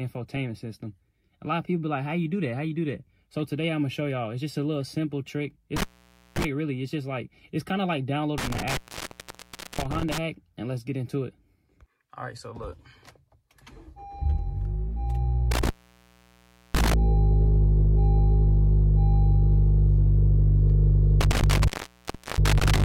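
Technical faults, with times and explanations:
5.76–6.45 s, 8.38–10.18 s, 15.51–16.94 s, 21.21–22.84 s: intermittent contact. A loose plug or cable connection opens repeatedly. The signal drops out for 0.52, 1.02, 1.04 and 0.70 s respectively, with crackle at each break and reconnection as the contact scrapes open and closed.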